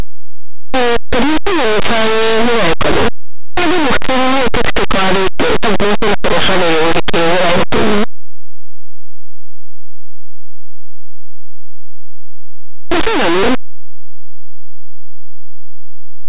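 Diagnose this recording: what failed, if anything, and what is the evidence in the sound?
Linear audio read as companded, throughout: a sample-format conversion fault, where plain 8-bit samples were expanded as mu-law codes, so values just on one side of zero turn into the largest outputs while those on the other side stay small, giving harsh distortion.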